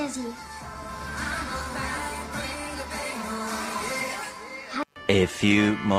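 Load changes in the computer disturb the audio circuit's shared ground, and this computer activity noise adds a faint buzzing pulse of roughly 150 Hz, about 40 dB below the signal, across the whole clip. The sender's clock runs about 2% slower than the receiver's, so throughout there is clock drift between sender and receiver and the jitter buffer keeps draining. From 0.36 s to 5.46 s, the receiver makes repeated timing corrections, stretching playback to 98% speed by repeating short pieces. Together they add roughly a tenth of a second and are heard, if at all, as small, unevenly spaced hiccups and a slightly unsteady tempo.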